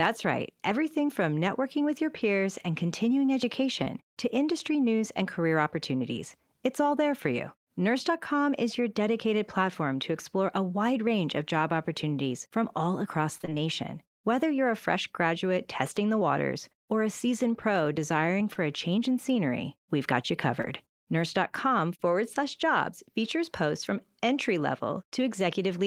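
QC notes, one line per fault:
3.83–3.88 s, 18.53–18.58 s, 20.62–20.65 s: short concealed packet loss. Each time about 20 ms of audio failed to arrive, and the receiver bridged the hole by extending the preceding sound for roughly 20 ms before cross-fading back to the real signal. The patch is heard as a brief smear or wobble, between "your peers and continuing" and "to industry news and", then between "a seasoned pro desiring" and "a change in scenery", and once more at 20.62 s.
13.38–13.53 s: repeated packet loss (robotic sound). Just after "opportunities from all across", four separate gaps fall within about 0.16 s, the longest about 21 ms, together losing about 80 ms. Each gap is filled by continuing the last sound before the next loss arrives, so nearly half the stretch is synthetic. The rapid alternation of real and patched audio gives a choppy quality with fragments missing.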